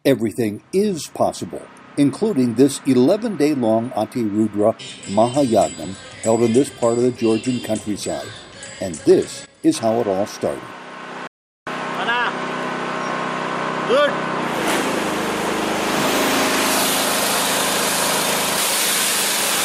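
At 11.27 s the input feeding the recorder was lost, most likely through a dropped connection or a momentary mute, while the recording carried on writing silence. The result is an audio dropout to silence lasting about 0.39 s, until 11.67 s. The sound stops abruptly mid-flow and the gap is silent with no room tone underneath. Whatever was happening during those 0.39 s is missing, and the sound then resumes just as suddenly.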